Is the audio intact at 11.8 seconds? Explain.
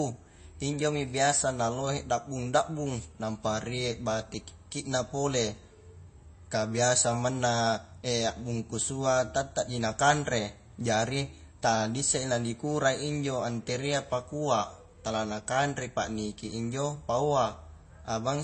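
No. At 11.8 seconds, as across the whole clip, the speech carries likely MP3 compression damage, which fits a low bitrate around 32 kbps. Treble is cut at 8.3 kHz, and weak frequency lines drop in and out between frames, giving a watery, swirly sound with smeared attacks. A spectrogram shows a flat ceiling at 8.3 kHz and flickering, patchy energy below it.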